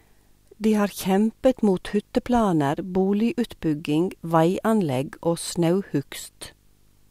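A speech recording with video or display buzz running throughout: a 50 Hz field-rate buzz with harmonic hash, plus a thin 15.6 kHz line-rate whine, roughly 40 dB below the speech. On a spectrogram this shows as evenly spaced horizontal harmonic stripes and a steady bright line near 15.6 kHz.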